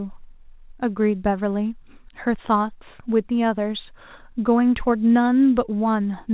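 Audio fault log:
No faults logged; the speech comes over a call path using G.711 mu-law at 64 kbps, with nothing above 4 kHz as that codec's band limit requires.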